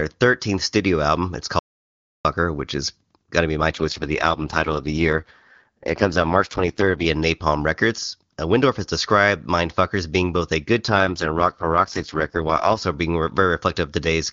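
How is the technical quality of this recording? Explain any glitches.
The quality is marked by one dropout and two spells of degraded coding, heard over what sounds like AMR-WB (HD Voice) wideband speech that, in its clean stretches, fits the codec's top 23.85 kbit/s mode.

Audio dropout to silence, 1.59 to 2.25 s: the sound stops dead for about 0.66 s and returns mid-flow, with no room tone in the gap. Whatever was said then is lost, likely because the input was disconnected, the link failed or something muted it while recording continued.

AMR rate drop, 3.72 to 7.06 s and 10.90 to 12.82 s: with no gap and no change in bandwidth, the speech turns rough and synthetic, consistent with the network forcing the codec down to about 6.6 kbit/s to protect a weak radio link, then restoring the higher rate.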